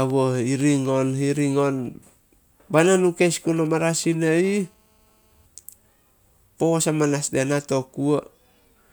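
From 0.10 to 1.86 s the speech carries small regular ticks, one every 0.25 s. These are periodic USB or driver dropouts: something blocks the audio path at a fixed interval, and each time a tiny fraction of a millisecond of sound is replaced by silence.

Between 3.57 and 4.38 s a galloping dit-dit-dit of short raspy buzzes appears, roughly 25 dB below the speech. These are GSM signalling bursts: a nearby 2G phone sends brief groups of radio bursts at 217 Hz, and the audio circuitry rectifies them.

From 4.44 to 5.46 s a continuous hard, harmonic-rich buzz at 217 Hz sits about 34 dB below the speech, unrelated to it. This is GSM phone buzz: a nearby phone in a call transmits steadily 217 times a second, and each pulse is demodulated into the audio.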